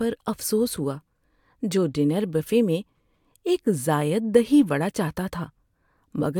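No technical faults can be heard anywhere in the speech recording, and the signal stays steady and continuous throughout.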